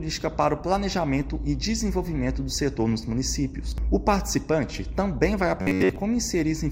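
From 5.62 to 5.96 s the sound turns into a rigid, metallic buzz pitched at about 94 Hz: robotic sound from repeated short buffers. Most of that stretch is likely made of a roughly 11 ms slice replayed over and over while fresh audio was missing.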